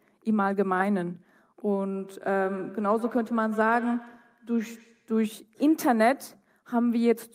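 From 1.95 to 5.23 s the speech comes back at a fixed interval of roughly 150 ms, thin and ringing, at most about 16 dB below the speech. This is feedback echo between two devices: a second nearby device replays the audio, the microphone recaptures it, and local echo cancellation misses it.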